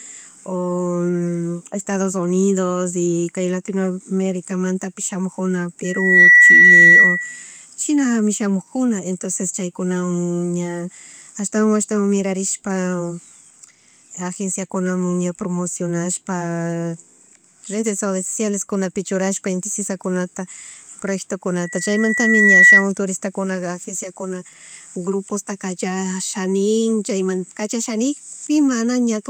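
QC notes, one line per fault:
5.84–7.45 s and 21.63–22.87 s, loudspeaker feedback squeal: a 1.9 kHz tone swells over roughly 0.4 s, then about a second, to about 15 dB above the speech, before "chinami shamug" and "turistakunaga agenciakuna grupostaka". The microphone re-amplifies its own loudspeaker output at that frequency.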